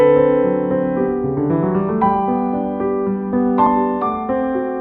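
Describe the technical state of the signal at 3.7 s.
Right at 3.66 s there's a compressed frames skipped fault: a few whole frames never got played, so the audio jumps ahead by roughly a tenth of a second, which fits 32 ms codec frames.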